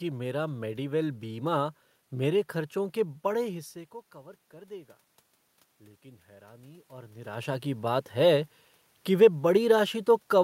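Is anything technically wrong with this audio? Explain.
Yes. From 6.02 to 8.12 s there is automatic gain rising: the input fell by about 19 dB, so the gain control slowly added about 5 dB, and voice and room noise swell together over two seconds before "है कि वे".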